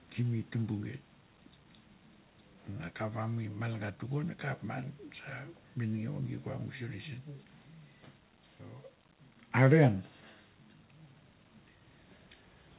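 No technical faults are audible in this speech recording.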